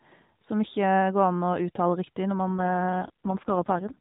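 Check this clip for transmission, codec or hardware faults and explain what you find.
One transmission fault stands out in the last part of the clip.

An AMR rate drop runs from 2.48 s to 3.98 s. The narrowband AMR mobile codec has no band above 4 kHz. Before this point the speech sounds the way it does at 12.2 kbps, with only light codec roughness. Here the link steps the codec down, and the sound fits a fall to about 4.75 kbps, with fewer bits per frame left to describe the speech. The band does not change and nothing drops out, but the voice turns buzzier and more synthetic until the clip ends.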